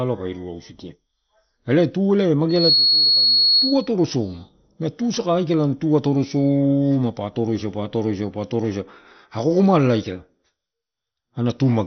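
A speech recording with two problems. Throughout, the sound is dull and gurgling with a granular edge, and on a spectrogram nothing appears above about 6.1 kHz while the upper bands flicker in and out. That is likely heavy MP2 compression at a low rate, around 48 kbps. Right after "elae tu eh", a loudspeaker feedback squeal runs from 2.49 to 3.89 s. A single 4.3 kHz tone swells over roughly 0.3 s to sit about 5 dB above the speech, showing as a bright horizontal line on the spectrogram and a thickened waveform envelope.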